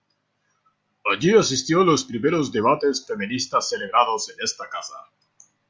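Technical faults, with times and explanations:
No technical faults are audible in this speech.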